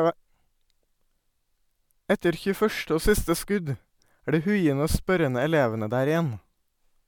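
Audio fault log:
No technical faults are audible anywhere in the speech signal.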